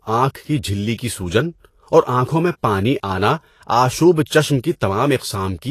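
From start to finish the speech has a hissy, grainy top end, with the treble broken up into noisy texture, tones sounding roughened and consonant onsets smeared. Nothing comes through above about 14.2 kHz. That's likely Vorbis compression at a low setting, with the high-frequency detail quantised so coarsely it turns into noise of similar energy. The amount of damage points to a bitrate somewhere around 36 kbps.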